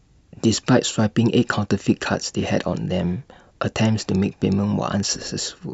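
No fault can be heard anywhere in this speech recording. Nothing in the audio breaks, drops out or distorts at any point.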